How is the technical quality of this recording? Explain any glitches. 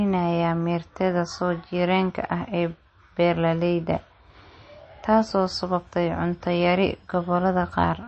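The technical quality is poor throughout. The speech sounds watery and swirly, with nothing above about 8.4 kHz. This is likely MP3 compression at a low bitrate, consistent with roughly 32 kbps: short of bits, the encoder cuts the treble and drops weak frequency lines that flicker between frames.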